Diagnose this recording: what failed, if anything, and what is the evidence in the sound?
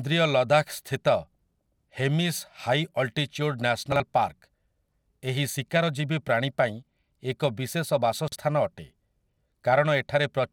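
The buffer or packet-delivery stage failed, producing chunks out of order at 3.92–4.00 s and 8.28–8.36 s. In each spot a 40 ms chunk plays one chunk late, swapping with its neighbour. Nothing goes missing, but the speech jumbles briefly and there are three hard joins.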